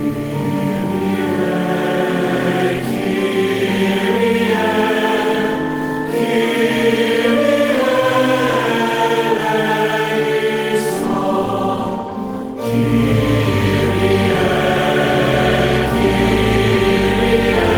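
Nothing goes wrong here at all, so there's no technical fault to point to anywhere in the clip.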